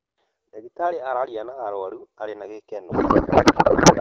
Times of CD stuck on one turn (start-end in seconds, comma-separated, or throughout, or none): none